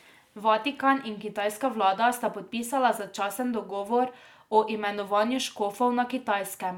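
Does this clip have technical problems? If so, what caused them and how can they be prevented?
No, there are no technical faults to trace in this speech recording, so nothing needs preventing.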